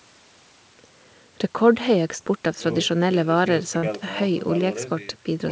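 At 2.18 to 2.21 s the speech briefly smears or wobbles. This is a short concealed packet loss: about 20 ms of audio arrived too late to decode, and the receiver patched the hole by extending the preceding sound before blending back into the real signal.

From 3.77 to 3.84 s the speech is replaced by a short fading fill, then jumps ahead. This is a burst of packet loss: about 60 ms went missing, and the receiver stretched the last sound while turning it down, so that stretch of speech is simply lost.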